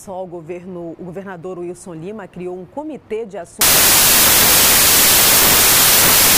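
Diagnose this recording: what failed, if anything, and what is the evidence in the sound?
Wrong sample width from 3.61 s to the end, at the sample-format conversion stage. The sound drops into loud noise with the original buried beneath it, slowed to about two-thirds speed and lower in pitch, which points to packed 24-bit samples being read as 16-bit.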